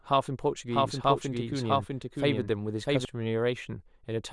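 From 0.71 s to 3.05 s the speech carries a doubled audio track: a second, full-band copy runs roughly 0.7 s behind the original at about the same loudness, then drops in and out abruptly. Unlike an echo or reverb, the copy has no decay and no room colour, and it does not fade. It is likely the same signal captured a second time through a slower path, or two out-of-step copies left in an edit.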